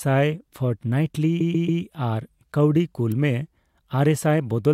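From 1.40 s to 1.81 s the speech stutters: a block of about 139 ms is played three extra times, adding roughly 418 ms to the clip. These are repeated frames. A run of encoded data was delivered more than once, so the decoder replayed it. On the waveform the same envelope shape appears four times in a row. On the spectrogram the identical pattern tiles across the span.

At 3.12 s a sharp snap sits on top of the speech. It is an electrical switching spike, most likely a nearby switch or discharge arcing briefly into the audio line. The waveform shows it as a needle-thin spike lasting only a few milliseconds. On the spectrogram it is a narrow vertical stripe running from the lowest frequencies to the top of the display.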